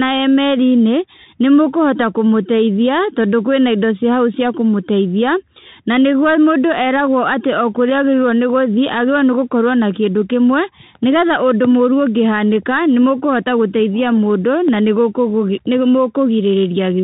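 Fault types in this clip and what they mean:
Bluetooth CVSD headset codec: The speech sounds thin and muffled, with scratchy s sounds, a granular hiss underneath, and distortion on loud high sounds. A one-bit adaptive-step coder cuts everything above 4 kHz and cannot keep up with fast changes, which fits a 64 kbps CVSD stream.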